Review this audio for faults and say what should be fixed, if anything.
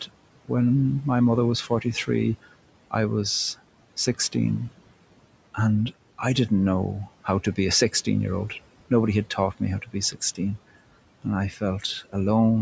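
Noise suppressor artifacts run through the whole speech clip. The suppressor treats the steady room noise as something to remove and pulls it down by about 18 dB frame by frame. As a result, the background sinks in the pauses and swells back under speech. On a spectrogram, the noise floor looks patchy and flickering, with frame-sized blocks switching on and off between syllables. Gentler suppression with smoothing of the gains across frames and frequency bands would prevent this.

Speech cut by the noise suppressor occurs at 9.82–9.95 s, just after "had taught me how", and again at 11.51–11.62 s. Each cut lasts roughly a tenth of a second. The suppressor mistakes quiet speech for noise and turns it down by up to about 13 dB, so the sound seems swallowed. The waveform shows a sudden notch in the envelope, and the spectrogram shows those moments faded along with the background. A higher gain floor and better speech detection in the suppressor would keep soft speech from being removed.

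The room noise sits about 18 dB below the speech. Nothing in the audio extends above 8 kHz, which is the limit of the call's microphone path.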